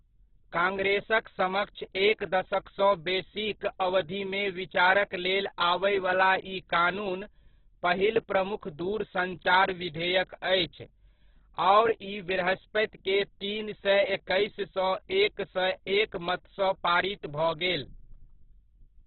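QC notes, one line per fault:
Throughout: Opus compression, likely at a very low rate around 8 kbps in music mode. Nothing gets above 4.4 kHz, so the speech sounds narrow and boxed-in. With so few bits, the bands are filled in with noise, which makes everything rough and grainy.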